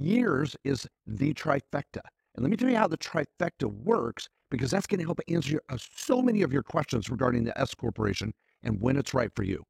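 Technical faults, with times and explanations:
Throughout, overlap-add ripple: the speech has a fast, rough flutter, a kind of robotic tremolo pumping at around 40 times a second, with the level swinging by about 11 dB on each cycle. That's what you get when the audio is chopped into windowed frames and stitched back together with an overlap whose windows don't add up to a flat gain, so the loudness dips and recovers once per frame.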